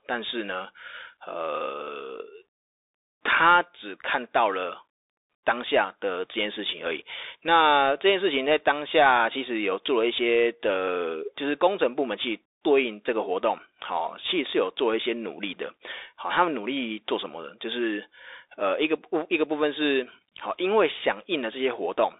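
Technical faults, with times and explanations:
Throughout, Bluetooth CVSD headset codec: the speech sits between 300 Hz and 3.7 kHz, with nothing above 3.8 kHz, and the one-bit up-or-down coding leaves a granular hiss and scratchy s sounds. Those artefacts set it apart from a clean telephone band-limit, and the sound fits a 64 kbps CVSD link.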